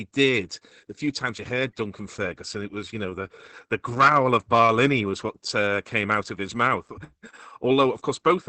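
Opus voice compression runs throughout: SILK coding squeezes the speech into a band ending near 8.3 kHz, with coarse excitation leaving it muffled, hoarse and robotic, consistent with roughly 10 kbps.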